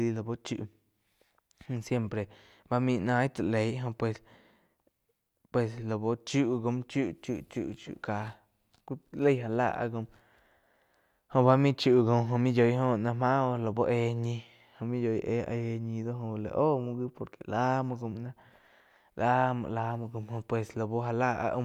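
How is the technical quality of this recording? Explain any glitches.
Nothing here glitches or drops out, so there's really nothing technical to flag in this speech recording.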